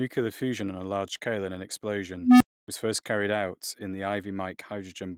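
At 2.20 s, just after "large scale in an", an unstable filter takes over. A low tone of roughly 300 Hz swells over about 0.21 s and clips. The recursion then overflows, and the sound drops out for about 0.28 s, resuming before "first carried out in".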